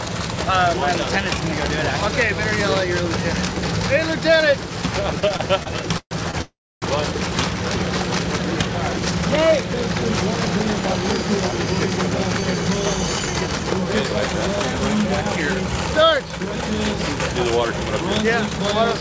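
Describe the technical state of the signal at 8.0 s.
At 8.0 s the signal is intact, with no dropout, glitch or other fault, only the steady band limit of the G.722 call path, which leaves nothing above 8 kHz.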